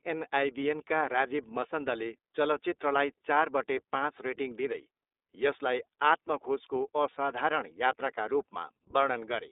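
From start to finish the speech carries iLBC codec damage. Nothing passes above 3.8 kHz, and each frame is coded independently, so a plainly audible rough, synthetic grain sits on every syllable. That grain separates it from a clean 300 Hz to 3.7 kHz telephone band, and it fits 30 ms frames at 13.33 kbps.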